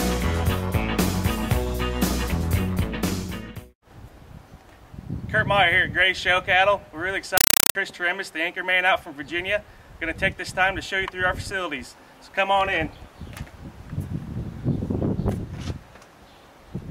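A compressed stream played as audio appears from 7.37 to 7.75 s. Here an AC-3 bitstream reached the output as if it were ordinary PCM samples, skipping the decoder. Each packed frame plays as a 5.33 ms burst of noise, then silence from the zero padding, repeating at 31.25 Hz. That cadence, with the burst density, fits a 256 kbps AC-3 stream. The result is a harsh, very loud chattering static that replaces the sound for that stretch.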